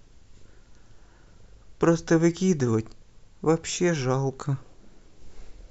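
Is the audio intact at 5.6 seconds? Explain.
Yes, the speech at 5.6 seconds plays through intact, with no dropout, click, distortion or other fault at that moment.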